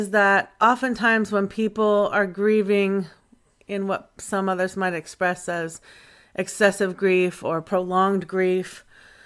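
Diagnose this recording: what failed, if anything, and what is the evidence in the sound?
Listening through the speech, nothing stood out that would point to a failure at any stage of the chain.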